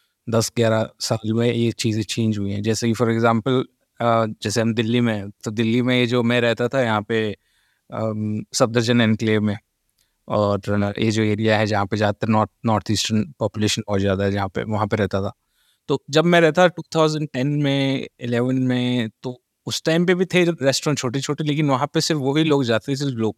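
No technical faults detected anywhere in the speech recording.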